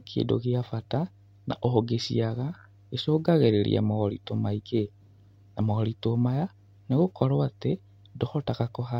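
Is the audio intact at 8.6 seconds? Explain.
No, mains hum runs through the whole clip, including 8.6 s: a steady 50 Hz tone roughly 30 dB below the speech, showing as a constant horizontal line at 50 Hz on a spectrogram.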